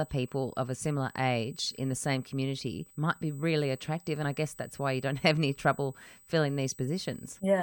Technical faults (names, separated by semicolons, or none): USB whine